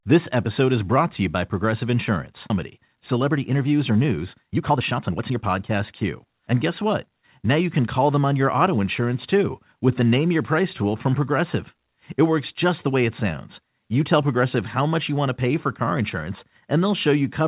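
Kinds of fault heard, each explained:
Skip ahead: At 2.5 s playback jumps forward with no fill, dropping roughly one and a half seconds of speech. The jitter buffer discarded a backlog of audio that had queued up, so the sound on either side of the jump is butted together almost directly. The result is an abrupt discontinuity in the speech rather than a silence or a smoothed-over gap, and the listener simply loses that stretch of content.
Jitter buffer speed-up: From 2.77 s to 7.08 s the speech plays at about 120% of normal rate with its pitch unchanged, sounding noticeably hurried. After the skip, the buffer was still holding more audio than its target, so the receiver repeatedly cut out short segments of one or a few pitch periods to drain the excess, removing around a second in total. The narrowband G.711 call path, with nothing above 4 kHz, carries this compressed stretch.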